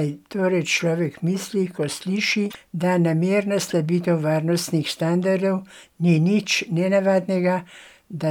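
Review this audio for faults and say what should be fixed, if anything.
At 2.47 to 2.55 s the speech breaks up for a short stretch lasting about 84 ms, the sign of damaged data in a compressed stream. Corrupted bytes there made the decoder misread the frames and lose sync until it found the next valid frame header. Protect stored and transmitted files with checksums and reliable transport.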